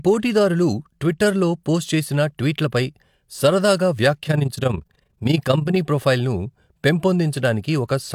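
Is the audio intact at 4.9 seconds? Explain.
No. At 4.9 seconds the audio sits inside a stretch of overlap-add ripple running from 4.24 to 5.79 s, starting just after "పోస్ట్ చేసిన ట్వీట్లపై సరదాగా". The signal was split into windowed frames and rejoined with an overlap whose windows fail to sum to a steady gain, so the level swells and dips by about 11 dB once per frame, around 30 times a second. The speech takes on a rapid, rough flutter, a rough tremolo.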